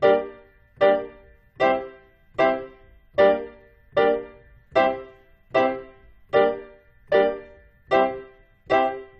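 Nothing stood out as a technical fault on listening to these sounds.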